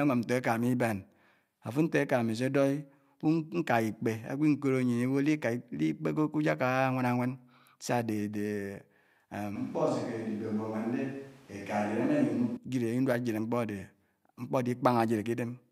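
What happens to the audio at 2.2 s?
Nothing goes wrong at 2.2 s; the speech runs through that moment intact, with no dropout, click or distortion.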